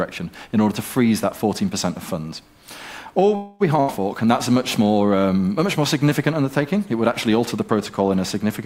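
At 3.35 s the sound stalls into a call audio freeze lasting until 3.62 s. The last fragment is stretched into a fading buzz or hiss for roughly a quarter of a second (about 248 ms). This is likely packets held up in transit while the jitter buffer ran dry. When the audio returns it picks up exactly where it left off, so nothing is lost. Instead, everything after it now runs about 248 ms later than before.

At 3.80 s, ending near 4.02 s, comes a burst of packet loss. The receiver bridges it with about 80 ms of a held, fading tail of the preceding sound. When playback resumes it has skipped ahead by the same 80 ms, so that stretch of audio is gone for good. This is what separates it from the freeze: the concealment sounds alike, but here the gap swallows material rather than delaying it.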